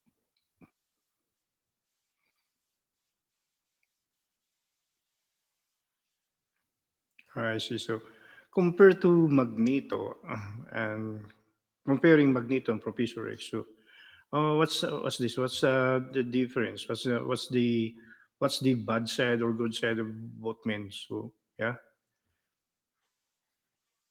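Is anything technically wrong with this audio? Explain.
No, nothing here is technically wrong with it.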